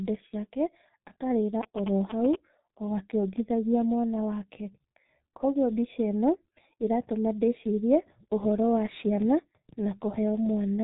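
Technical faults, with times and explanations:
Throughout, G.723.1 codec: the speech has been squeezed through this early internet-telephony codec at about 6.3 kbit/s, and the damage is heavy. Nothing survives above 3.8 kHz, so the top end is gone and the sound is muffled. The codec models the voice in 30 ms frames and updates that model slowly, which leaves a hoarse, rough texture and smears consonants into one another.
1.63 to 2.35 s, GSM signalling bursts: a nearby 2G phone is signalling, for instance ahead of an incoming call or text, and emits short groups of radio bursts. The audio circuitry rectifies them into sound, producing a galloping dit-dit-dit of brief buzzes at a 217 Hz repetition rate. The interference is strong, only about 5 dB below the speech, for this stretch of under a second.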